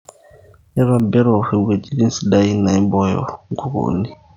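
At 1.00 s the speech turns duller and stays that way to the end. Nothing remains above 6.6 kHz. A faint new background noise appears, far below the speech. Loudness holds steady, with no gap. The likely cause is an input switched to a poorer device.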